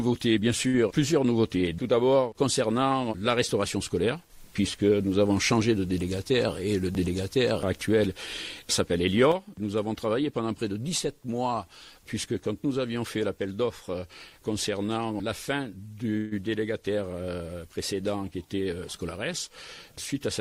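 Right at the start, from 0.67 to 0.76 s, there's a short stall from a late packet: a packet missed its slot, the jitter buffer ran dry, and the receiver stretched the last bit of sound for about 62 ms before carrying on. Nothing is lost, but that sound hangs on too long with a faint buzzy dip.

From 6.47 to 7.01 s you get a jitter buffer speed-up. The buffer was holding more than its target, so the receiver clipped out tiny pitch-period slices, removing roughly 70 ms in total. The audio runs at about 110% speed with the pitch unchanged and sounds a bit rushed.

At 9.32 s the level of everything drops abruptly by about 6 dB and stays down to the end of the clip. That step is what you'd hear if one channel drops out, likely a stereo channel lost before the mono sum. Anything that was only in that channel vanishes with it.

Between 16.17 and 16.33 s there's a call audio freeze, likely from packets held up in transit emptying the jitter buffer. 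The last sound carries on as a fading buzz for about 140 ms rather than going silent, then picks up where it left off. That inserts a gap without losing anything.

The speed-up comes back from 18.31 to 18.71 s. Again roughly 70 ms gets trimmed out, this time pushing the audio to about 114% speed, so that stretch sounds noticeably hurried while the pitch stays put.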